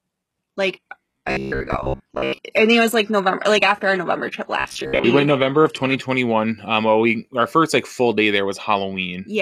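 Adaptive stream starting at a low bitrate, 0 to 6.0 s: the player opens on a cheap rendition, one that sounds like HE-AAC at around 16 kbit/s, so playback can begin before the connection has been measured. The treble is thin and partly synthesised, and codec artefacts are stronger. At 6.0 s the sound jumps, with no gap, to a fuller rendition consistent with AAC-LC near 96 kbit/s.

Robotic sound from repeated short buffers, 1.11 to 2.39 s and again 4.60 to 5.05 s: the speech turns into a stiff, metallic drone at 66.7 Hz that still roughly follows the speech's rhythm. This is likely caused by audio arriving too slowly, so the software keeps replaying the last chunk, about 15 ms long, while the fresh audio is dropped. Most of the sound in those stretches, roughly two thirds or more, is repetition.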